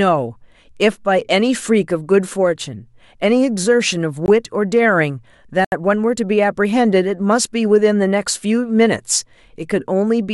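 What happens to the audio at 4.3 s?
A block of digital silence runs from 4.26 to 4.28 s: the speech drops abruptly to silence for 20 ms and returns without fade, giving a click-like hole.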